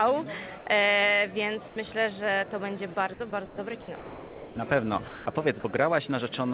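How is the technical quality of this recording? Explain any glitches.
The recording has two related faults from a call link that stops transmitting during pauses. The audio is band-limited to about 4 kHz, which fits a G.711 mu-law call codec.

Comfort noise in place of the background appears at 0.58–0.66 s and 1.68–1.76 s. The sender likely paused transmission when it judged only background was present, and the receiver filled each 80 ms gap with synthetic noise. That fill is smooth and featureless, about 3 dB and 4 dB quieter than the real background.

Sound dropped by the voice detector occurs at 3.46–3.58, 3.82–3.88, 3.96–4.56, 5.08–5.26 and 5.60–5.64 s. Quiet sound was likely taken for background, so it stopped being sent and was replaced with comfort noise. The longest gap, at 3.96 s, loses about 330 ms before the sound returns.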